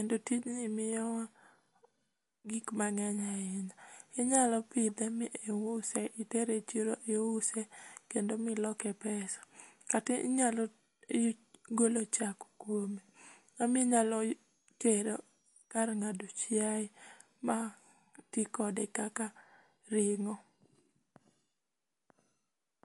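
Throughout the speech, the treble stops dead at 11.3 kHz. The sound is watery and swirly, and s sounds chirp metallically. This is likely MP3 compression at a bitrate near 48 kbps. Starved of bits, the encoder drops the treble and switches faint detail on and off.

From 12.79 to 15.78 s, a switching supply whistle appears. It is a thin high tone near 7 kHz. Its pitch wanders between 5.6 and 6.8 kHz as the load shifts. It sits faintly, about 45 dB below the speech.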